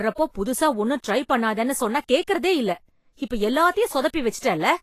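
Throughout the speech, the treble is grainy and hissy, with roughened tones and softened attacks, and nothing sounds above 14.2 kHz. This is likely Vorbis compression at a low bitrate, around 34 kbps, where coarse residue quantisation turns fine high-frequency detail into noise.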